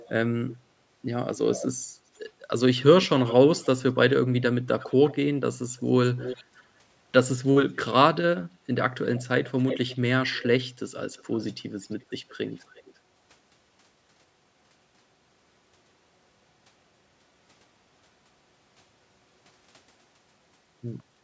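Speech with a delayed copy of one voice trailing about a third of a second behind (335 to 344 ms) at 0.00–0.57, 1.45–1.67, 3.01–3.67, 4.79–5.13, 5.77–6.64, 9.03–10.46 and 11.16–12.94 s. The copy sits roughly 10 to 30 dB below the direct speech. This is likely echo leak: a loudspeaker-side echo canceller let part of the returned signal through.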